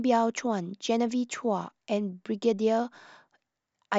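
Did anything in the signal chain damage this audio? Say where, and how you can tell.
No, nothing in the signal chain has damaged this speech recording, and the signal reaches the listener intact at every stage.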